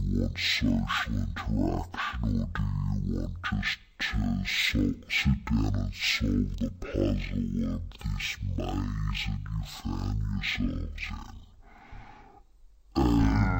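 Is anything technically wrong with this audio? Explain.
Yes. Stereo read as mono, throughout: interleaved left and right samples play back as one channel, so the speech runs at half speed, 12 semitones low.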